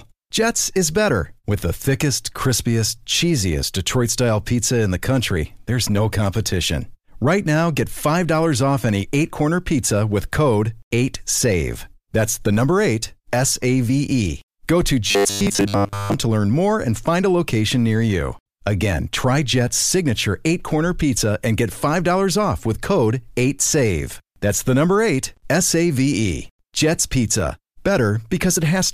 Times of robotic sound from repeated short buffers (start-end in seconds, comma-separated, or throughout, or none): 15.07-16.14